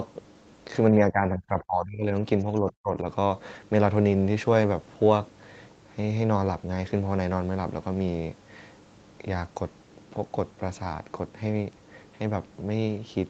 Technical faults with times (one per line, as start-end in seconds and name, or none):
0.98-2.23 speech suppressed in double talk
2.60-3.06 speech suppressed in double talk